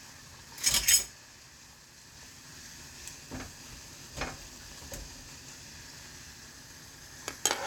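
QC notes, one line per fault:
No faults heard in this audio.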